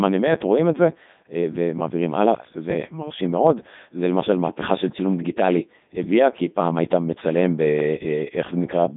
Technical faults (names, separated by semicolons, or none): Codec 2 vocoder